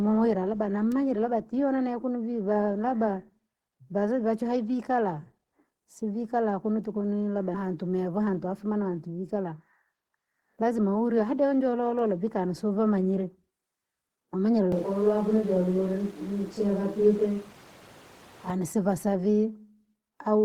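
At 7.54 to 7.64 s, just after "kunu tukunu labda", there is a skip ahead. Roughly half a second of speech never arrives. Playback jumps straight to later audio with no gap filled in. The two sides of the cut butt together almost directly. The sound lurches forward mid-phrase, as if a piece was snipped out. This fits a jitter buffer dropping audio that was overdue while newer audio waited.

Two jitter buffer speed-ups follow. From 8.09 to 8.52 s the speech runs at 108 percent speed. From 9.35 to 11.61 s, ending just before "vi kani siwavamanyire", it runs at 109 percent. The buffer was holding too much audio. It trimmed short pitch-period slices, many in a row, to shrink the delay. About 40 ms goes in the first stretch and about 200 ms in the second. The pitch stays put, but the talker sounds hurried.

From 14.72 to 18.5 s the sound abruptly turns roomy and hollow. The bass thins and background noise rises to about 25 dB below the speech. 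The loudness stays roughly the same. The change in and out is sudden. The likely cause is a switch to a distant microphone after the close microphone's feed dropped out.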